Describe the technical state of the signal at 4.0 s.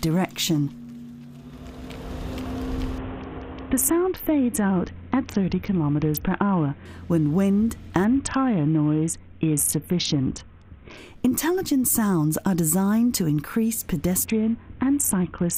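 At 4.0 s the signal is inside a Bluetooth SBC bit pool drop running from 2.98 s to 6.85 s. The link has throttled the encoder, which points to a bit pool falling from about 28 to 6, near 60 kbps. Starved of bits, the highest sub-bands get few or no bits and the rest are coarsely quantised, so the treble dulls while a gritty grain rises. Unlike a plain low-pass filter, the dullness arrives with added roughness and lifts at 6.85 s.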